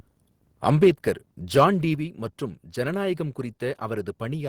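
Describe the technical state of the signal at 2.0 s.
Just before 2.0 s, at 1.95 s, the whole signal, speech and background together, drops abruptly by about 5 dB in a single step, right before "மற்றும் ஜனநாயகம்", and stays at the lower level from there. This is a microphone volume stepped down event, likely caused by the call software judging the input too hot and cutting the device's input volume at once rather than easing it down gradually.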